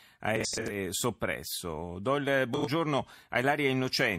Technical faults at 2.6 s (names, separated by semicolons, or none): corrupt frame concealed